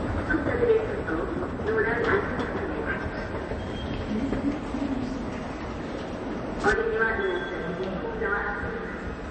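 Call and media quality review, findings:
Watery, swirly texture throughout, nothing audible above 8.3 kHz, transients smeared. Likely MP3 compression at a low bitrate, roughly 31 kbps: encoder cuts treble at a fixed frequency and zeroes weak spectral lines, which flicker frame to frame.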